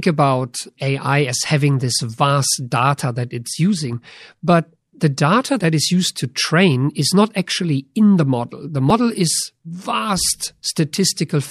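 Audio missing between chunks, at 8.90 s: the speech jumps forward abruptly, as if a tiny slice had been cut out and the two sides butted together with no gap of silence between them. Roughly 30 ms seems to vanish, enough to make the flow stumble for an instant. The likely cause is a recorder or processor handling the audio in 5.0 s blocks and dropping a short piece while closing one block and starting the next.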